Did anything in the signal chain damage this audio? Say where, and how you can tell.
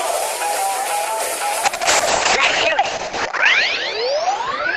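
Yes, a call bitrate drop at the codec stage. From 1.65 s to the end, the top end closes from 20 kHz to 8 kHz and the sound turns coarse and watery. That fits the encoder being starved from around 48 kbps to 6 kbps for about 1.4 s.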